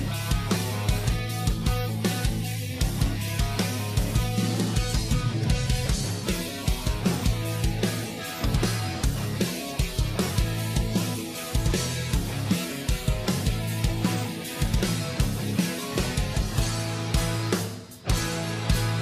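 At 5.86 s, lost LE Audio frames cause a brief gap. The decoder fills about 10 ms with a noisy smear, which fits one dropped frame.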